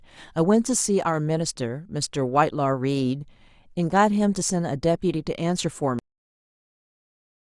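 At 5.99 s the speech stops abruptly in a cut-off end: the final buffers were never written, so the sound halts mid-utterance and drops straight to digital silence for the remaining 1.4 s. The waveform shows a vertical edge into a flat line, and the spectrogram goes blank with no decay tail.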